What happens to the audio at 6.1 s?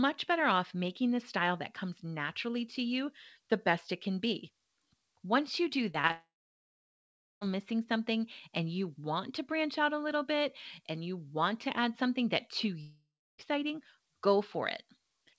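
Just before 6.1 s, two short concealed packet losses hit in quick succession. About 20 ms of audio failed to reach the decoder in time at 6.02 to 6.05 s, and again at 6.07 to 6.11 s, right after "you do". Each time the receiver bridged the hole by extending the preceding sound and then blending back into the real signal. The result is a brief smear or wobble, heard twice close together.

At 6.11 s a long network dropout likely follows. Incoming audio stops until 7.43 s, about 1.3 s in all. The receiver first carries the last sound forward as a fading buzz or hiss. After that, roughly 1.15 s of near-silence remains. The audio resumes at "missing something and you", with the intervening stretch gone, and like the rest of the call it carries nothing above 8 kHz.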